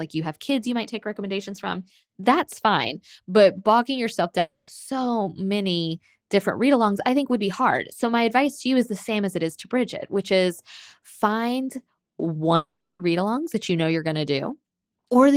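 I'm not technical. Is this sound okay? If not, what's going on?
No. At 4.39 to 4.70 s and 12.55 to 13.02 s, the speech turns into a fading buzz, the second fading to silence, then returns with a piece skipped. This long network dropout was likely audio lost in transit. Unlike a quick click, a whole stretch vanishes.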